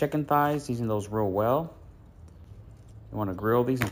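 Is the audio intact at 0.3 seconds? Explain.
No. At 0.3 s, as throughout the clip, there is imaging from sample-and-hold upsampling: the audio was raised from 16 kHz to 48 kHz by repeating samples without a smoothing filter. Mirror images, the lowest spanning 8 to 16 kHz at about 23 dB down, add a bright metallic fizz.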